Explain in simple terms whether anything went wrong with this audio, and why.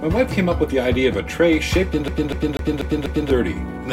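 At 2.08 s the sound gets stuck. The same short piece, about a quarter of a second long, plays five times in a row. Each repeat has a tiny silent gap where it jumps back. At 3.30 s it breaks free and moves on. This is the fault called CD stuck on one turn. A scratch makes the laser slip back to the same spot on every spin of the disc. The result is that fast, even stutter.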